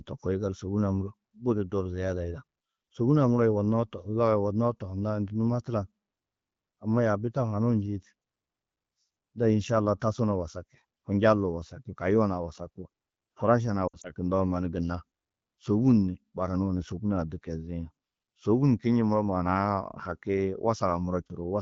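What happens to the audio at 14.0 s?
Lost AMR speech frames occur from 13.88 to 14.12 s. Radio errors corrupted several speech frames, about 80 ms in total spread across 160 ms, which fits four 20 ms frames. The wideband decoder covered each gap by repeating its last good pitch and vocal tract settings at falling gain. The longest run, about 60 ms, smears and fades the sound quickly, and the voice returns briefly weak or rough against the clear 12.65 kbit/s HD Voice.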